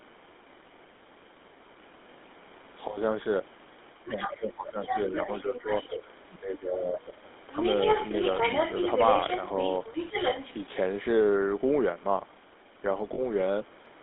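A speech recording carrying the buzzy, gravelly roughness of the GSM full-rate codec throughout, band-limited to roughly 250 Hz to 3.6 kHz, consistent with a 13 kbps mobile voice channel. The talker is suppressed in double talk at 3.94 to 5.13 s, 5.42 to 5.71 s and 6.39 to 7.19 s, with dips of up to about 20 dB, likely an echo canceller ducking both voices. The other side's voice leaks through at 4.12 to 4.32 s, 4.69 to 6.03 s and 7.53 to 10.54 s, at times nearly as loud as the talker, likely from incomplete echo cancellation. At 13.14 s, 40 ms of lost GSM frames is held as a brief metallic ring, which fits two concealed 20 ms frames.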